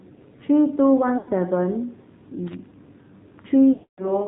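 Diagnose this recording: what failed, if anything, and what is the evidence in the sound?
Codec stage: the speech went through the AMR narrowband mobile codec at a low mode, fitting about 7.4 kbit/s. Nothing above 4 kHz survives, and the voice sounds buzzy and synthetic throughout.

Network stage: lost AMR speech frames. The decoder kept reusing its last good settings with falling gain, so the sound smears and dips from 1.18 to 1.31 s. A longer run from 3.74 to 4.19 s draws out and fades away.

Analogue wiring: loose connector crackle. An intermittent contact made and broke the signal rapidly, producing an irregular burst of crackling from 2.47 to 2.66 s.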